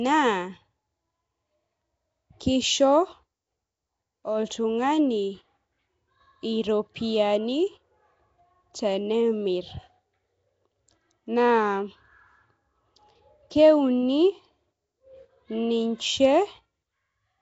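Throughout, the speech sounds rough and hissy-haloed, smeared and underwater, with nothing above 7.7 kHz: likely Nellymoser compression, which fills weak bands with noise.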